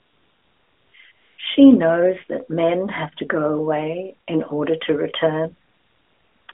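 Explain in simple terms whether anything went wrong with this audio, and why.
The phone decided nobody was talking and stopped sending speech, so the receiver filled those gaps with made-up background hiss. This is AMR comfort noise. It appears at 0.00–0.94, 1.12–1.38, 5.68–6.48 and 6.52–6.54 s, where the real background gives way to a smooth, even noise that switches in and out. The narrowband mobile codec carrying the speech leaves it sounding telephone-thin.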